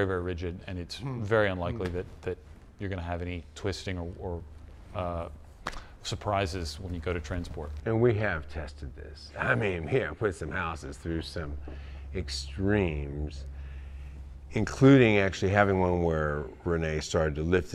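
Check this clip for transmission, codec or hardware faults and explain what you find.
Nothing to report: no transmission, codec or hardware fault can be heard anywhere in the clip.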